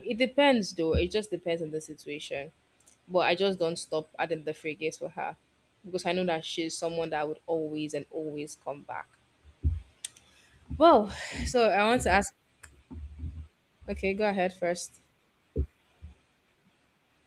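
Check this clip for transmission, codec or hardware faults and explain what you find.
Nothing in this speech recording points to a fault. There are no events to place in time or trace to a mechanism.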